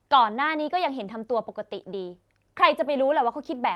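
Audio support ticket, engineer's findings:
Speech signal shows no defects on review; the call path behaves as expected, with the audible band topping out around 12 kHz, consistent with a super-wideband call codec.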